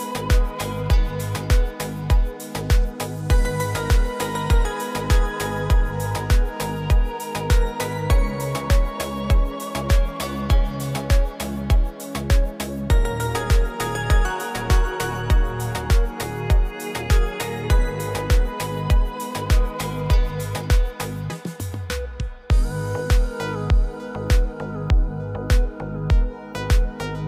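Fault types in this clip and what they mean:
Video or display buzz: A screen or video cable is leaking into the audio path. From 23.93 s to the end, a 50 Hz buzz sits under the sound with hash above it. A 15.6 kHz line-rate whine rides on top. Together they sit roughly 30 dB below the sound.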